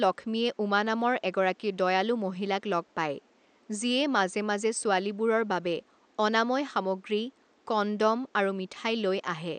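No technical faults can be heard in this recording.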